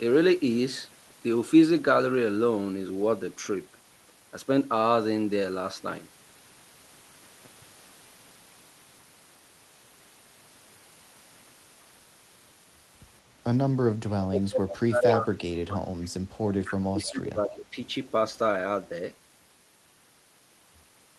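From 14.06 to 15.94 s the speech is pushed down hard, at its deepest by around 30 dB, for roughly two seconds. This is speech suppressed in double talk. The likely cause is both parties talking at once, with the echo canceller unable to tell the near talker from loudspeaker echo and attenuating everything. It is heard as dips, dulling and broken-up stretches rather than a clean gap.

At 16.65 to 16.73 s a short echo leak appears: a faint copy of the speech arriving 256 ms late, about 15 dB below the direct sound. The likely cause is a loudspeaker echo that the canceller failed to remove fully, so a residue of its microphone pickup was sent back.

Suppression in double talk returns from 16.76 to 17.77 s, shallower at around 20 dB and lasting about a second. Inside it, at 17.6 to 17.65 s, a second brief echo leak comes through at the same 256 ms delay, about 20 dB down.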